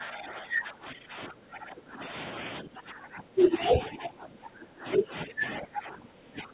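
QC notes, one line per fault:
0.00–2.46 s and 2.62–6.53 s, speech suppressed in double talk: the talker's level dips, by about 15 dB in the first stretch (roughly two seconds affected in all) and about 20 dB at worst in the second. This is likely an echo canceller that heard both ends at once, couldn't tell the local voice from loudspeaker echo, and clamped down on both. The audio also sits below 4 kHz, consistent with a G.711 call path.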